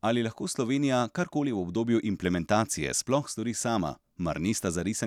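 No technical faults are audible in the speech.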